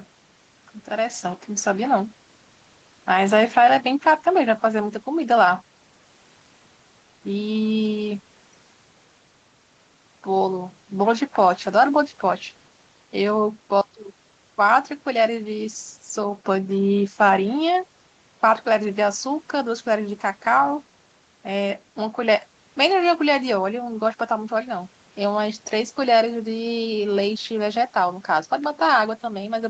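The speech carries no technical faults, with its content stopping around 8 kHz as expected from a wideband call path, and faint room noise sitting about 37 dB below the voice.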